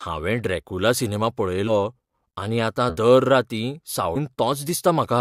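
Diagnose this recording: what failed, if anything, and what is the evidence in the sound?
Codec stage: compressed frames skipped at 1.67–1.72 s, 2.89–2.97 s and 4.15 s. Speech jumps ahead by multiples of the 10 ms frame, about 70, 70 and 150 ms.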